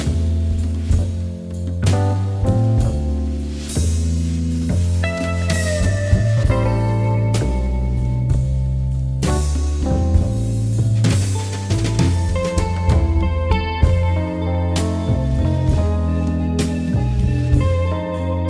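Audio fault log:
No technical faults are audible; the signal stays steady and continuous across the whole recording.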